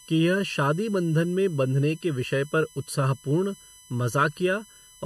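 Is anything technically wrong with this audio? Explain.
Yes, two faults run through the whole speech clip.

USB whine: a fixed-pitch 1 kHz whine with harmonics, strongest near 11 kHz, about 25 dB below the speech, from USB frame current leaking through power or ground.

Channel delay (comb filtering): one channel lags the other by under a millisecond before the mono sum, cancelling evenly spaced frequencies from around 700 Hz upward, which makes the speech sound hollow and phasey.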